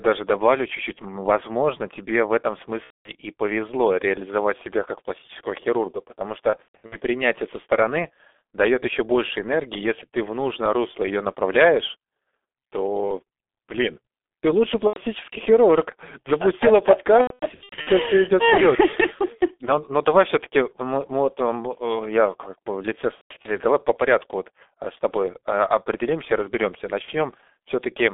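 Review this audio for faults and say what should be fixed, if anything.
Heavy G.723.1 codec damage runs throughout. The speech is muffled and hoarse, confined to roughly 250 Hz to 3.6 kHz. Consonants blur because the low-rate voice model, which fits about 6 kbit/s, updates slowly. Prevent this by using a wideband codec at a higher bitrate.

VoIP packet loss concealed by the speech codec occurs at 2.84 to 3.12 s, 6.50 to 6.97 s, 14.87 to 14.99 s, 17.21 to 17.90 s, 23.15 to 23.51 s, and 27.02 to 27.13 s. The decoder stretches its last sound into fading buzz and mutes it from the third lost frame in a row. Prevent this with a larger jitter buffer, forward error correction, or a more reliable network path.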